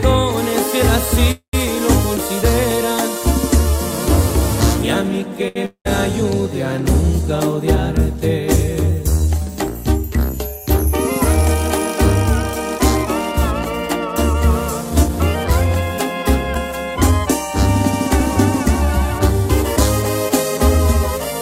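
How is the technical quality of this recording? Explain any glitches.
The recording has several network playback glitches, each typical of a call passing through a jitter buffer.

At 1.31 s the sound freezes until 1.55 s. This is likely a call audio freeze, with packets held up in transit. The last sound is carried on as a fading buzz, ending in about 100 ms of silence. Then playback resumes where it stopped. Nothing is lost, but about 218 ms of delay is added.

From 5.48 to 5.57 s there is a short stall from a late packet. The buffer ran dry, so the last sound was stretched for about 75 ms. Then it continued from the same point. A sound is held slightly too long, with a faint buzz.

Right after, from 5.65 to 5.87 s, comes a long network dropout. No audio arrived, likely because packets were lost. The last sound fades as a buzz into about 90 ms of silence. About 200 ms of audio is never heard.

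Two jitter buffer speed-ups follow, from 10.86 to 11.56 s and from 14.33 to 15.82 s. The buffer held too much, so short pitch-period pieces were cut out repeatedly. That removed roughly 50 ms and then roughly 100 ms. The audio runs 5 to 6 percent fast at unchanged pitch and sounds slightly hurried.

At 16.55 s there is a skip ahead. A stretch was dropped while later audio was already waiting. Playback jumps forward almost seamlessly, with roughly 70 ms missing. The two sides are butted together.

From 17.11 to 21.19 s a jitter buffer slow-down runs. The buffer was low, so single pitch periods were repeated to rebuild its reserve. This added 78 ms. The audio plays at 98 percent speed, at the same pitch, slightly drawn out.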